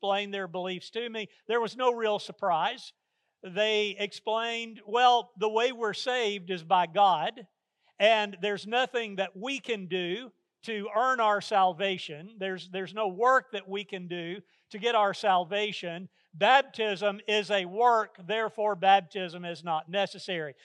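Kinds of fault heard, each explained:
No technical fault can be heard anywhere in this audio. There are no dropouts, level jumps or other disturbances to list.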